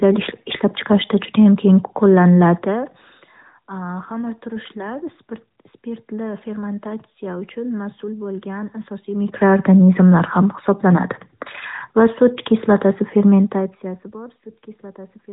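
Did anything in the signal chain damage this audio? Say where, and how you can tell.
No, nothing in the chain has damaged this speech: the level rises and falls smoothly where it changes, and the narrowband mobile coding, whose light traces fit a rate around 12.2 kbps, limits the band to below 4 kHz as that format always does.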